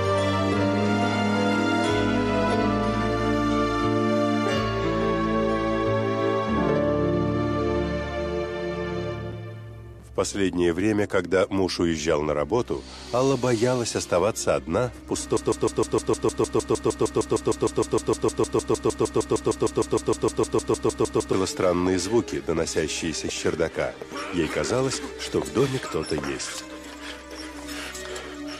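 From 15.37 s to 21.33 s the audio falls into a broken-record loop: a fragment about 154 ms long plays back to back, identical each time, roughly 39 times over nearly six seconds. The result is a rapid, mechanical stutter at about 6.5 repeats per second. This likely comes from a stalled player, encoder or stream that kept re-sending the last buffer it held, so the material that belonged in that span is missing.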